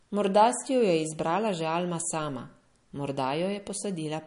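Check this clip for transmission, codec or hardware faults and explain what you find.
One fault runs throughout: likely MP3 compression. Treble stops near 10.6 kHz, and weak detail swirls watery. This fits a starved bitrate around 40 kbps.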